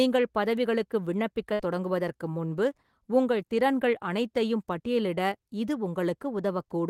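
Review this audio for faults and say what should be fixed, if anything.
A burst of packet loss interrupts the speech from 1.53 to 1.61 s, just before "தொடங்குவதற்கு முன்பு உங்கள் திறன்கள்". The receiver concealed about 57 ms by stretching the last sound into a fading buzz or hiss, and about 60 ms of the original speech is gone. On a spectrogram this shows as smeared, fading harmonics followed by an abrupt jump. The waveform shows a decaying repeated pattern, then a discontinuity. Adding forward error correction and a larger jitter buffer would prevent it.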